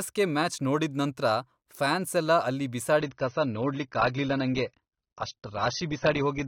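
From 2.99 s to the end, the adaptive stream drops to a lower bitrate, as the player switches to a leaner version of the same AAC stream; the sound points to a fall from roughly 96 to 24 kbit/s. The change is abrupt, with no gap. Everything above 6.3 kHz vanishes, so the speech turns dull and muffled, and the coarser coding leaves audible artefacts on the remaining content.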